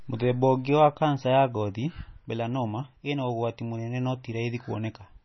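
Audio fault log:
throughout: MP3 compression. Nothing is heard above 5.9 kHz, and the speech sounds watery, with swirling s sounds and smeared onsets, likely from heavy MP3 encoding at a very low bitrate, fitting about 24 kbps. A spectrogram shows a hard ceiling at 5.9 kHz with flickering gaps beneath.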